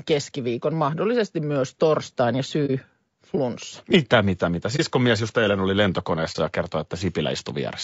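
All the way through, the speech sounds rough and grainy, with noise between harmonics: likely low-delay AAC compression, AAC-ELD at a rate that fits roughly 32 kbps. Then there's AAC frame loss with muting, where a lost frame was zeroed, leaving brief 30 ms dips at 2.66 s after "mahdollisesti myös torstain ja", 4.76 s after "mitä mitä", and 6.32 s after "just eilen oli".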